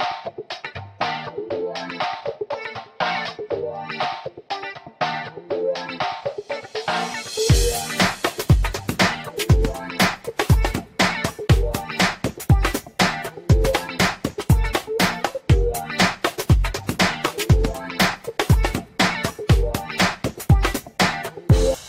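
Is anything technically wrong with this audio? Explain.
No, nothing technically wrong can be heard in this audio. No working path is noted beyond the recording itself, so there is nothing further to point to.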